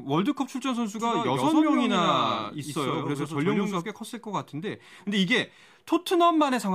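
A speech recording carries a doubled audio track from 0.99 s to 3.81 s. In that span, a second full-band copy of the speech runs about a tenth of a second behind the first. It sits somewhat quieter, around 5 dB down. The copy has no decay or room colour. It cuts in and out abruptly at the span's edges. The likely cause is the same signal reaching the mix twice, once through a slower path.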